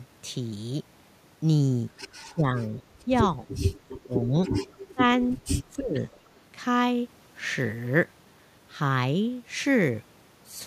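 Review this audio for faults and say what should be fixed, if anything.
The speech dips in five places: 2.24 to 2.74 s, 3.05 to 3.11 s, 3.87 to 4.35 s, 4.94 to 5.00 s and 5.34 to 6.00 s. Most dips go down by about 20 dB, and the last by about 25 dB. The short one at 3.05 s is milder, about 5 dB. This is speech suppressed in double talk, likely caused by both sides talking at once. The echo canceller could not tell this talker from the far-end echo. So it turned everything down. To prevent it, use an echo canceller with better double-talk detection, or a headset on this side.

Faint repeats follow the speech at 2.76 to 2.83 s, 4.67 to 4.74 s and 6.14 to 6.28 s. Each is a copy delayed by 299 ms. It sits about 30 to 35 dB below the speech. These are short scraps. This is echo leak, likely from a loudspeaker at the other end. That side's echo canceller missed part of what its microphone picked up, and the rest came back. 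To prevent it, tune that echo canceller or have the far end use headphones.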